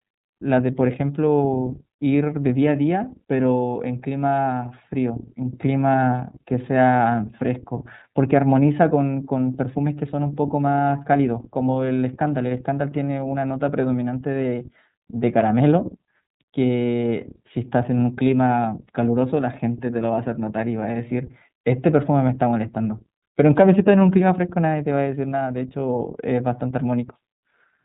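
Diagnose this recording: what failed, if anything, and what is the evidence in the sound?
Speech was encoded with the iLBC codec throughout: nothing above 3.8 kHz survives, and the rough, synthetic texture fits independently coded 30 ms frames.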